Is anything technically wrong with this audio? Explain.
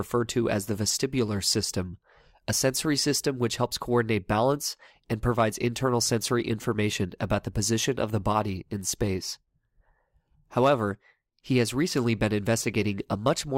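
No, nothing technically wrong can be heard in this speech recording.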